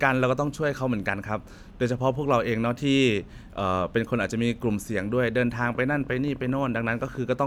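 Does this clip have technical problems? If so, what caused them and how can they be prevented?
Yes. From 5.64 s to 7.44 s a train of clicks ticks over the speech, around thirty same-shaped pulses at roughly 15.6 per second, spaced unevenly and peaking at about the level of the speech itself. The likely cause is electrical interference from nearby equipment or a faulty connection or power supply. Unlike buffer-underrun glitches, the clicks don't fall on a fixed period, and they continue through pauses. Keep phones and switching supplies away from the recording chain and use a stable, well-powered interface.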